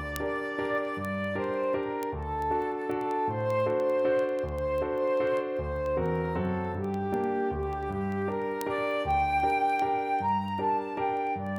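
Word clock ticks run from 0.16 s to 11.56 s: about a hundred sharp ticks of uneven strength, roughly ten per second. The receiving device runs on its own clock rather than locking to the digital source, and the two differ by something like 200 parts per million. Each time the clocks drift past one another, a few samples are misread and a single sample is dropped or doubled. Each of those slips is a tick.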